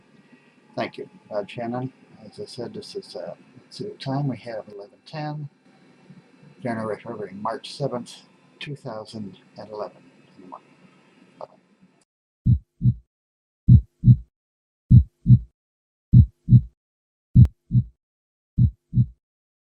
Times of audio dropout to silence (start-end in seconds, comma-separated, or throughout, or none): none